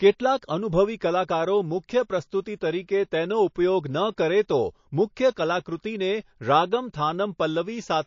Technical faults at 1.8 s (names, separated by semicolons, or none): MP3 compression